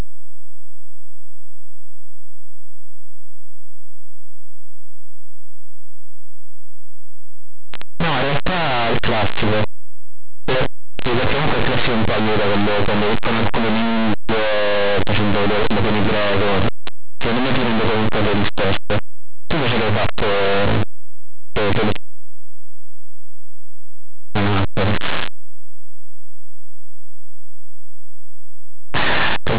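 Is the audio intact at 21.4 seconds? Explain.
No. At 21.4 seconds, as throughout the clip, the speech suffers linear audio read as companded: plain linear 8-bit samples are decoded as mu-law codes, so values just on one side of zero blow up into the largest outputs while those on the other side stay small, giving very loud, harsh distortion.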